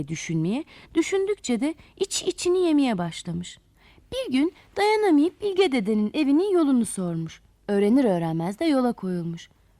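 Nothing here stands out as a technical problem, so there's nothing to flag anywhere in this audio.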